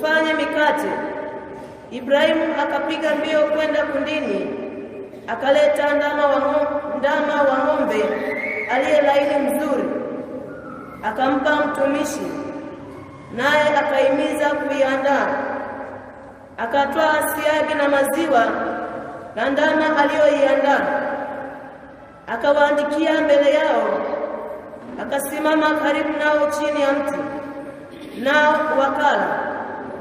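No technical faults can be heard anywhere in this audio. Nothing in it calls for comment.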